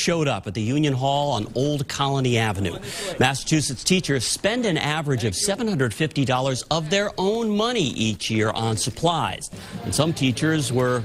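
From about 8.05 s to the end, the audio shows a call bitrate drop. It turns rough and muffled as the encoder is squeezed, which fits a fall from around 128 kbps to roughly 19 kbps. It bottoms out for about 1.2 s and never recovers.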